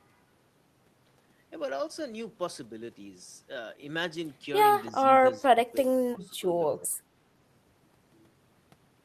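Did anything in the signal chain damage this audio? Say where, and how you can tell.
Yes: the speech dips by up to about 20 dB from 4.9 to 6.5 s and 6.73 to 7.0 s, likely call-processing speech suppressed in double talk, since it ducks rather than falling silent like a dropout.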